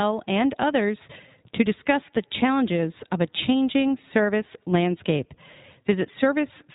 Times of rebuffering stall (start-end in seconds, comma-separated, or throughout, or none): none